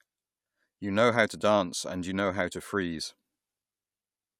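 Nothing in the way of a technical fault turns up anywhere in this bit of speech, so there's honestly nothing here to point out.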